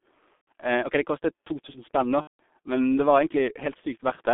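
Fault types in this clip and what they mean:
G.723.1 codec: The whole clip sounds muffled and hoarse. Consonants are smeared, and nothing reaches above about 3.6 kHz or below about 200 Hz. The heavy coding damage gives the speech a rough, grainy texture. This is the G.723.1 internet-telephony codec, which fits a bitrate of about 6 kbit/s. It describes the voice with a coarse model refreshed only once every 30 ms, so it cannot track quick changes in the speech.
VoIP packet loss concealed by the speech codec: Twice the speech is stretched out and fades away, first from 0.35 to 0.48 s and then from 2.21 to 2.39 s, just before "men det". Each time the speech stays weak and distorted for a moment afterwards. Packets carrying about 120 ms and then 180 ms of audio were lost. The decoder filled each gap by repeating its last pitch and filter settings at falling gain, so it recovers only gradually once packets return.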